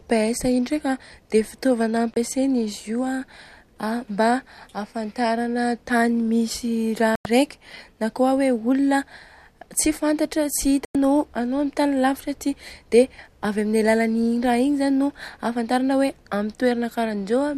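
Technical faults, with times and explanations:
2.14–2.17 s, 7.15–7.26 s and 10.85–10.95 s: digital broadcast dropout. The receiver stopped getting valid frames and muted until clean ones returned, so the speech cuts or quickly fades to silence for about 24 ms, then twice for about 96 ms, consistent with one and four lost frames. The missing audio is gone.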